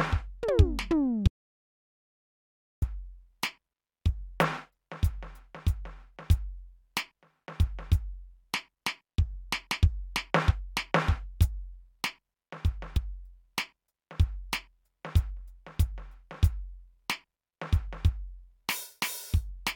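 A music clip with an audio dropout to silence from 1.28 to 2.82 s, where about 1.55 s of material vanishes into silence with no room tone or decay. That abrupt silence, rather than a fade or a quiet passage, points to the input likely having been lost while recording continued. Later, damaged data in the compressed stream gives two brief glitches, at 10.50 to 10.52 s and at 12.96 s. Unlike the dropout, these come from the decoder misreading corrupted frames and resynchronising.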